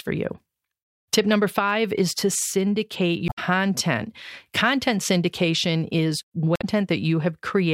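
At 3.25 to 3.39 s, after "five is to syndicate", and at 6.56 to 6.65 s, after "syndication is", damaged data in the compressed stream throws the decoder out of sync. It is heard as a brief chirp, click or short hole while it hunts for a valid frame.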